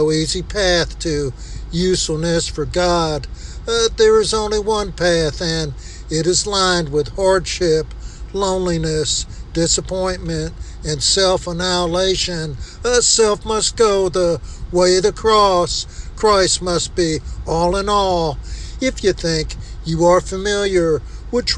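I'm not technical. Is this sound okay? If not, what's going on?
Yes, nothing in the recording points to a technical problem; it sounds the way it was meant to.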